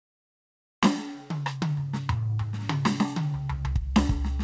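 From 0 to 0.82 s, comfort noise stands in place of the background. The music's real background is gone. A steady, featureless noise replaces it, about 20 dB quieter. The likely cause is discontinuous transmission, with the receiver filling the silence with synthetic noise.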